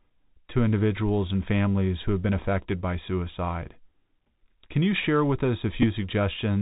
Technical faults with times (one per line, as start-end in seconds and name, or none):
0.00-6.62 Bluetooth CVSD headset codec
3.65 Bluetooth headset packet repeated
5.82-5.84 Bluetooth headset packet repeated